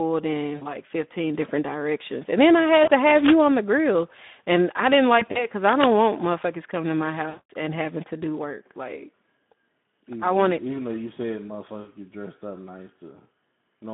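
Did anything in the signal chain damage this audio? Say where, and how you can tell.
Yes. The Speex codec damages the whole clip at the codec stage. The speech is confined to a line band of about 150 Hz to 3.7 kHz and carries a plainly audible hoarse, noisy graininess. This is CELP coding with too few bits for the excitation signal. The roughness points to a low-to-middle Speex setting, which fits a rate around 11 kbps, so the pitch pulses are rebuilt coarsely.

VoIP packet loss concealed by the speech codec occurs on the network side at 0.56–0.67 s, 2.83–2.91 s, 5.19–5.46 s, 7.29–7.50 s and 11.81–11.89 s. At each gap the decoder keeps repeating its last pitch and filter at falling gain, so the speech smears into a buzzy tone or coloured noise that fades. The 7.29–7.50 s gap is longest, suggesting about 200 ms missing. At 5.19–5.46 s the losses are scattered in short runs, and the voice stays weak after packets resume.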